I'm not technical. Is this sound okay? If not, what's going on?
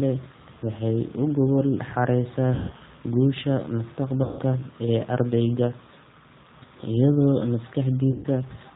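No. All the way through, the speech sounds slightly rough, thin and artificial, with the crisp top end missing, as if heard over a cheap phone line. That is the G.729 codec, a very compact format used for internet phone calls. Rather than sending the actual sound, it sends a rough description of how the mouth and throat are shaping it and rebuilds the speech from that. Nothing high-pitched gets through, and the rebuilt speech has this plainly audible synthetic edge.

There are also three short moments where the speech smears into a buzzy tone or coloured noise that fades. The first comes right after "u gogol xaaraysaa", from about 2.54 to 2.73 s. The second runs from 4.23 to 4.42 s, just before "ee ardayga", and the third from 8.12 to 8.27 s. These are VoIP packet loss concealed by the speech codec. Pieces of the call went missing in transit, about 160 ms in the first two gaps and 120 ms in the last. 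The decoder covered each hole by stretching the last sound it had and letting it fade, so the speech comes back weak or distorted for a moment afterwards.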